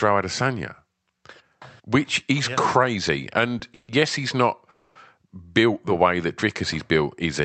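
At 3.74 s the speech halts for about 140 ms in a call audio freeze, the last sound stretched into a fading buzz before resuming on "yes he's". A second, longer freeze of about 250 ms runs from 4.70 to 4.97 s, ending at "built the way that". Delayed packets likely let the jitter buffer run dry. Nothing is lost, but each stall inserts a gap, pushing later speech back by that amount over the 8 kHz-wide call audio.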